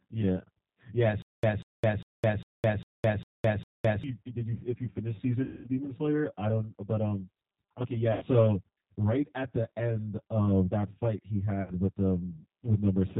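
Right from the start the speech has a hollow, phasey quality. That's channel delay (comb filtering): one channel sits roughly 10 ms behind the other, and summing them to mono carves evenly spaced notches starting down around 50 Hz.

On top of that, the G.729 codec damage is plainly audible throughout. Nothing gets through above 4 kHz, and the voice comes across slightly rough and synthetic. That fits an 8 kbit/s rebuild from a vocal tract filter and a few pulses per frame, rather than the actual waveform.

From 1.22 to 4.04 s there's a stutter with silent gaps. A fragment of about 190 ms plays, then about 212 ms of dead silence, repeating every 402 ms, seven times in all. It's likely a stalled stream replaying its last chunk on each retry, and the audio for that stretch is simply gone.

Then there's VoIP packet loss concealed by the speech codec at 5.43 to 5.67 s (210 ms lost), 8.12 to 8.24 s (90 ms) and 11.62 to 11.72 s (60 ms). 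The decoder stretches the last sound into a fading buzzy tone or coloured noise. Because each frame builds on the previous one, the voice stays weak or distorted for a little while after the packets come back.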